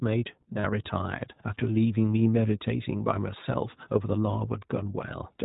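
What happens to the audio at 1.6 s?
At 1.6 s the speech is passing through an iLBC codec, as it does for the whole clip, coding each 20 ms frame's excitation independently at a rate that fits iLBC's 15.2 kbps mode. Nothing above 4 kHz survives, so the speech sounds muffled, plainly rough and synthetic.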